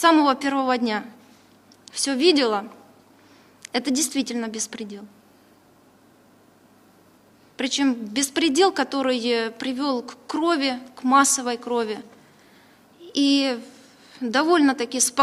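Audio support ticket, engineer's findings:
Nothing to flag on this one: listened through and didn't hear any fault worth chasing.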